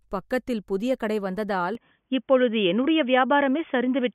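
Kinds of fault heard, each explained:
Input switched to a poorer device: at about 1.75 s, right after "பக்கத்தில் புதிய கடை வந்ததால்", the speech turns dull and boxy until the end, with nothing above about 3.5 kHz. There is no gap at the change, the level shifts by a few decibels, and a faint new background noise appears, so the cause is likely a change of microphone. A plain codec bandwidth drop would narrow the band without altering level, tone and noise floor together.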